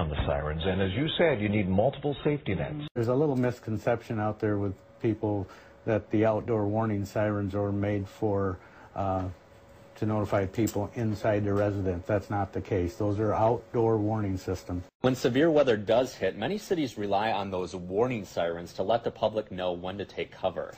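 No faults are audible anywhere in this recording.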